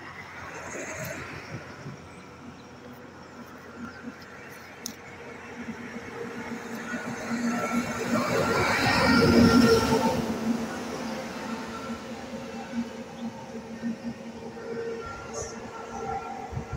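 Tiny skips at 3.85, 8.84 and 13.83 s, spaced exactly 5 s apart, each drop a sliver of sound; the likely cause is audio missing between chunks as 5-second blocks are joined. Brief forward jumps at 8.15, 10.28 and 15.29 s come from compressed frames skipped, with several 26.1 ms frames lost each time, roughly 0.1 to 0.15 s of audio.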